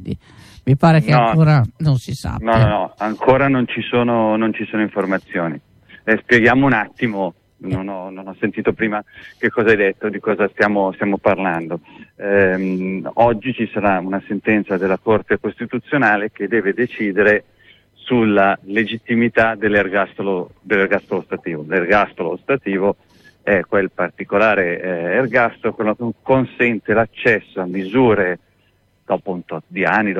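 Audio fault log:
Nothing stood out on listening.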